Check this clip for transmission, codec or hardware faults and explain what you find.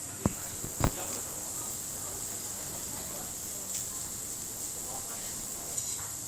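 One hardware fault is present: buffer tearing from 0.31 s to 5.76 s. The writing program and the hardware reading the ring buffer have slipped, so roughly a fifth of each period replays audio about 20 ms old, with hard joins. That produces a continuous 100 Hz robotic buzz, which fits a 10 ms period.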